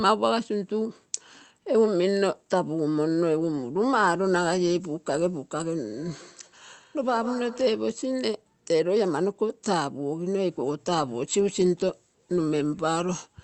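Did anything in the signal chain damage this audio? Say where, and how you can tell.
Yes. From 5.94 to 7.96 s the speech comes back as a thin, ringing repeat roughly every 150 ms, peaking about 17 dB below the direct sound. That fixed spacing points to a feedback echo between two devices at the call-processing stage. A second device in the same room played this call aloud, and its sound re-entered the microphone. Each echo canceller removes only its own device's playback, so the returning copy passed through untouched.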